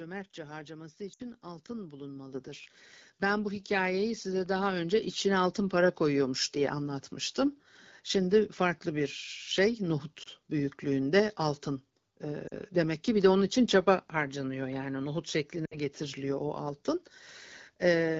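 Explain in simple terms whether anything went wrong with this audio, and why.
Two things went wrong in this speech recording.

Lost AMR speech frames: radio errors corrupted small chunks of the call, so the decoder filled each gap by repeating the last good sound at falling loudness. You hear a brief smear or dip at 1.13 to 1.23 s (60 ms), at 10.23 to 10.28 s just before "büyüklüğünde altın" (20 ms), at 12.47 to 12.53 s just before "demek ki bir de" (40 ms), and at 15.66 to 15.77 s between "çaba harcanıyor yani nohut" and "getiriliyor o altın" (60 ms).

Microphone volume stepped up: the call software judged the microphone too quiet and turned its input up in a single step, twice. At 2.34 s and again at 3.6 s, the voice and the background noise suddenly get louder together. The first jump is larger than the second.

The HD Voice (AMR-WB) codec carrying the call keeps the voice clear and full between these moments.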